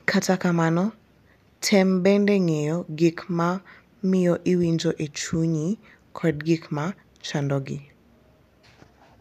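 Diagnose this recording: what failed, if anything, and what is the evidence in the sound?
Nothing failed; no fault can be heard anywhere.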